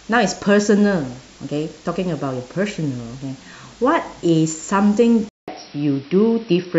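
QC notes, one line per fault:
5.29–6.79 s input switched to a poorer device: after a 0.19 s silence the speech dulls, nothing above 5.7 kHz, faint new noise, same level; likely a narrower-band microphone.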